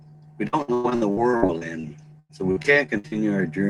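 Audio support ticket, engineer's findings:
Repeated packet loss (robotic sound), 0.47–3.14 s. Network path dropping or delaying packets; jitter buffer concealment extends last frame across each hole, roughly 29% of span patched, longest gap 98 ms. Result: choppy speech with clipped fragments.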